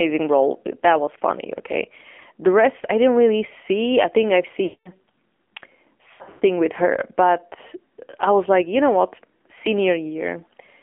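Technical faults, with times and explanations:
Throughout: AMR narrowband mobile codec. The speech is confined to roughly 250 Hz to 3.4 kHz, with nothing above 4 kHz, and a low bitrate consistent with 7.4 kbps leaves it plainly buzzy and synthetic. Unlike a simple telephone filter, the tone itself sounds modelled rather than merely dulled.
4.64 to 4.90 s: lost AMR speech frames. Just after "see I think I've", about 220 ms of frames went missing, so the decoder stretched the last pitch and vocal tract settings into a drawn-out buzz that fades toward silence, not an abrupt dropout.
6.14 to 6.44 s: lost AMR speech frames. Losses scattered over about 280 ms, with the longest unbroken stretch around 120 ms, give repeated brief warbles and dips rather than one fade, ending just before "with her", which returns weak or rough for a moment.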